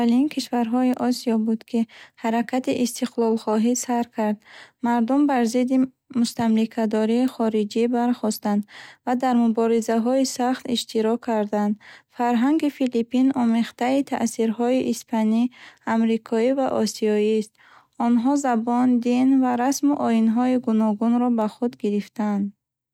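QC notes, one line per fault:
0.94 s, 7.28 s and 21.42 s, bit error spike: three isolated sharp ticks unrelated to the speech, each a single flipped bit that throws the sample value off by a power of two before it snaps back. The first two reach about -13 dBFS in one sample, the second just before "хориҷӣ бархостанд ва дар". The third is quieter, about -25 dBFS over two samples, right after "ва расму оинҳои гуногунро". Each shows as a needle of one or two samples on the waveform and a thin full-height vertical line on the spectrogram.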